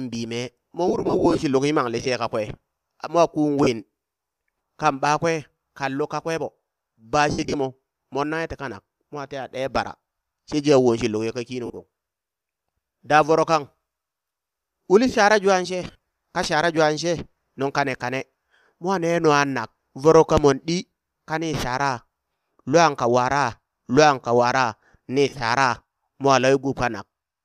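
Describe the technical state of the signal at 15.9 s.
Lost LE Audio frames affect the signal from 15.84 to 15.97 s. The gaps come in short bursts, the longest about 40 ms. The LC3 decoder repeats the last spectrum with random signs to cover each gap. The speech turns into a brief, noisy smear.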